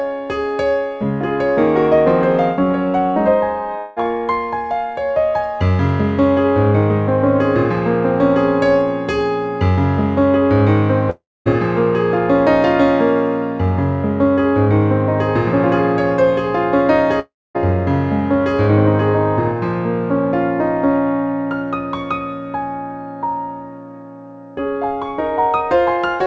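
At 3.78 s the sound smears into a short fading buzz for about 0.2 s before resuming slightly further on. At 11.10 s and 17.20 s, stretches of about 0.37 s do the same, but the buzz dies into roughly a quarter second of silence. Each is likely a long network dropout: packets stopped arriving, the receiver stretched the last sound to cover the gap, and the missing audio never returned. Nothing is heard above 8 kHz, consistent with a wideband call codec.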